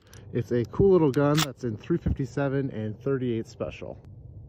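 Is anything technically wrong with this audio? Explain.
No, nothing technically wrong can be heard here.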